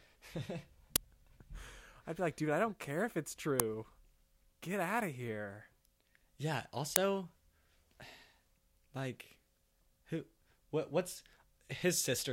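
At 0.96 s, 3.60 s and 6.96 s the speech is hit by an uninitialised buffer: a block reached the output before any audio had been written into it, so whatever stale data sat in memory was played as samples. Each one is a sudden, loud crack. The first lasts about 6 ms, which fits a 256-sample block; the later two last about 3 ms, consistent with 128-sample blocks.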